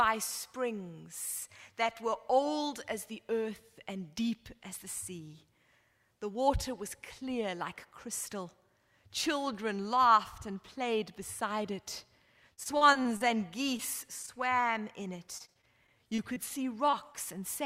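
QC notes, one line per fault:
12.53–13.35 s, repeated packet loss (robotic sound): choppy stretch with pieces missing. Six gaps, the longest 39 ms, were each patched by extending the preceding sound. About 140 ms was lost outright.
13.77–13.81 s, short concealed packet loss: a brief smear or wobble. About 20 ms never arrived, so the receiver continued the last sound and then blended back into the real audio.
14.23–14.64 s, repeated stalls (stutter): the sound drags and stutters but nothing is lost. The jitter buffer ran dry four times, for up to 18 ms each, and the last sound was held until playback could continue.
15.38–16.38 s, repeated packet loss (robotic sound): choppy, broken-up texture across seven gaps, the longest 21 ms. About 140 ms was missing, with roughly an eighth of the span filled by continuation.
16.91–16.95 s and 17.13–17.16 s, short concealed packet loss: two quick smears or wobbles. 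Each covers about 20 ms that never arrived, bridged by extending the prior sound before rejoining the signal.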